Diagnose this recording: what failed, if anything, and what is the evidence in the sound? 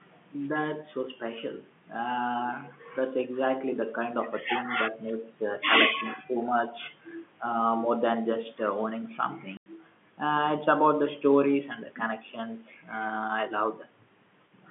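Speech suppressed in double talk, 6.16 to 6.30 s: at the call-processing stage the speech dips by about 10 dB for roughly a tenth of a second. The likely cause is an echo canceller that could not separate the near talker from loudspeaker echo during simultaneous talk and attenuated both.

Packet loss filled with silence, 9.57 to 9.66 s: at the network stage a 90 ms hole cuts through the telephone-band speech, with abrupt edges. Its length fits three consecutive 30 ms packets lost in transit, with the receiver playing silence instead of concealing the gap.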